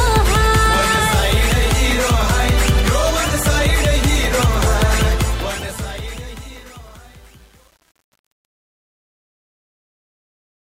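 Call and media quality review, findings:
Gritty tail on the fade-out, 5.02 s to 10.63 s, worst from 5.79 s on. Truncation distortion on a fade: the gain stage keeps 8 bits without dither.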